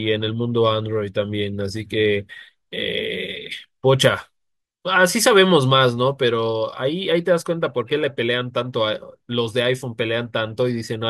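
A speech recording with no audible technical faults at any point.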